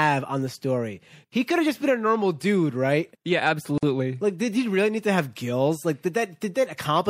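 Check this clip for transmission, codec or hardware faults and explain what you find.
Two faults stand out. The whole clip has a watery, swirly quality with dulled treble and smeared consonant attacks, likely from MP3 compression at a low rate, something around 64 kbps. Short of bits, the encoder cuts off the top end and drops quiet frequency lines that flicker in and out frame to frame.

From 3.78 to 3.83 s the speech stops dead for about 48 ms, then carries straight on. That's a gap at a join of encoded pieces. Each separately encoded piece brought its start-up silence and end padding along, which fits chunks about 6 s long.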